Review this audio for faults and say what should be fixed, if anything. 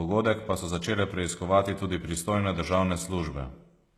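The speech has nothing above 12.3 kHz for its whole length, and the coding artefacts of a much lower-rate encode sit in the bands below. This is likely low-bitrate audio saved at a high bitrate. The file is MP3 at a generous rate, but the sound fits an earlier pass through something like HE-AAC near 16 kbit/s. The re-encode cannot restore what that first pass discarded. On a spectrogram, a flat, hard ceiling at 12.3 kHz runs across the entire clip, with blotchy, quantised texture beneath it. The waveform shows nothing unusual. Encode from the original source rather than from a low-bitrate copy.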